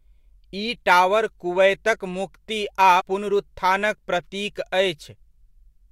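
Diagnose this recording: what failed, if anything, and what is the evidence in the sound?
A break at 2.99 to 3.02 s as speech jumps about a tenth of a second: compressed frames skipped, several codec frames dropped at decode.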